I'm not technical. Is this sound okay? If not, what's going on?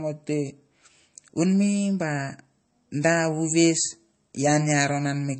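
No. Throughout, the speech sounds watery and dull, with nothing above 8.3 kHz, so s sounds lose their crispness. This is likely heavy MP3 compression.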